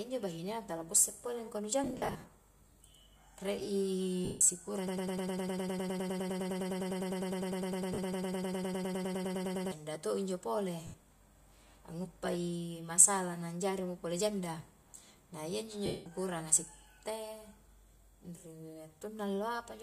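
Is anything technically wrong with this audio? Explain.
Yes, two things. The speech has short dropouts where LE Audio frames were lost, and a stretch where it gets stuck in a broken-record loop. Over both, the light grain of LC3 compression is just audible, which fits a bitrate around 64 kbps.

Lost LE Audio frames show up at 1.84–2.28 s, 4.25–4.41 s, 7.94–7.99 s, 10.87–10.94 s and 15.86–16.06 s. The first is several gaps spread over about 0.44 s, each run under about 70 ms. When frames go missing, the decoder fills in with the last spectrum and random signs, so the voice smears into noise and fades rather than cutting cleanly. The steps fit 10 ms frames.

From 4.87 to 9.72 s there's a broken-record loop. The same 0.10 s snippet repeats back to back, 48 times, giving a rapid stutter. It's likely a stalled player or stream resending its last fragment, and whatever speech belonged in those seconds is lost.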